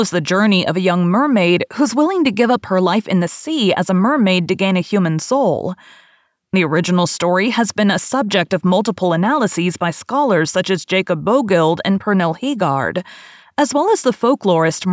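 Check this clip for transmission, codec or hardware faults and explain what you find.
Nothing turns up here: listening through the whole recording, there's no sign of any transmission, codec or hardware trouble to point to.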